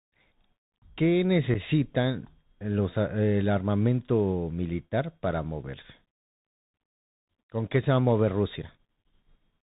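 The whole clip runs through a Bluetooth CVSD headset codec, which fits a 64 kbps link. Everything above 4 kHz is gone, s sounds turn scratchy, and there's a grainy hiss under the speech. At 1.54 s and again at 8.62 s, unconcealed Bluetooth headset packet loss drops roughly one packet each time, leaving an abrupt 7.5 ms hole.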